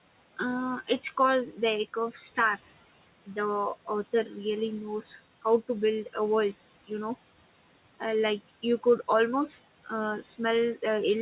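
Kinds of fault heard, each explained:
Noise suppressor artifacts: Throughout, a frame-by-frame suppressor pushes down whatever bands it judges to be steady noise, by about 17 dB. The room noise, about 19 dB under the speech, sinks in the gaps and swells back beneath talking. On a spectrogram the background between phrases shows patchy, flickering speckles rather than an even wash. The waveform's quiet stretches pump up and down in level. The call's G.711 codec leaves nothing above 4 kHz.
Speech cut by the noise suppressor: From 4.12 to 4.36 s the suppressor mistook part of the speech for noise and turned it down with the background, by up to about 13 dB. About a tenth of a second of that span sounds swallowed and faint. On the waveform the envelope dips abruptly inside that window. On a spectrogram the weaker upper harmonics and consonant energy there fade out or break into gaps, as the background does.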